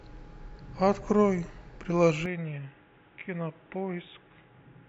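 At 2.26 s the speech abruptly turns dull and boxy, with nothing above 3.8 kHz, a drop of about 5 dB, and a new noise floor roughly 35 dB down, with no gap at the change. This likely reflects the input switching to a poorer device.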